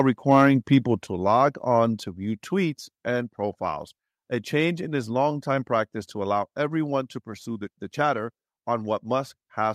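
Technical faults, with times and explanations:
0.30–0.47 s, microphone overload: the loudest peaks turn harsh and crackly, likely because the input gain drives the converter about 3 dB past full scale. On the waveform a small share of peaks are flattened, and the spectrogram shows broadband splatter above the harmonics.
1.02 s, microphone volume stepped down: speech and background both drop abruptly by about 5 dB just after the distorted burst, likely because the call software cut the device's input gain in one step. The waveform envelope shrinks sharply, and the spectrogram dims evenly across all frequencies.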